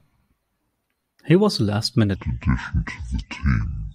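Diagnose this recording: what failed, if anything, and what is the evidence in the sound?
Section at the wrong speed, 2.16 s to the end, after "was a": speech runs at 0.575x, roughly ten semitones lower, likely a playback clock mismatch.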